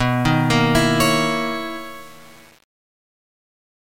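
From start to finish, quiet passages turn gritty and grainy, with error that follows the sound. This is likely low bit depth without dither, fitting about 7-bit rounding.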